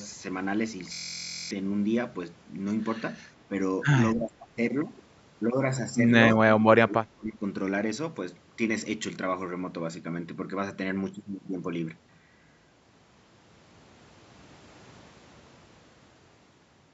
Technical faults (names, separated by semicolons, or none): system hang loop; speech suppressed in double talk